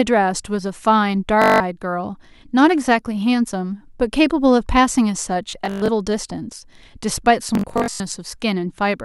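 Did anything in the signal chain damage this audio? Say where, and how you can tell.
Yes, Bluetooth stutter on the wireless link, at 1.42–1.60 s, 5.51–5.88 s and 7.55–8.00 s. The receiver repeats short slices of speech while packets fail to arrive, giving a machine-gun buzz. On a spectrogram this appears as comb-like repeated columns, and on the waveform as copied cycles. The speech then resumes after a gap of up to about 280 ms.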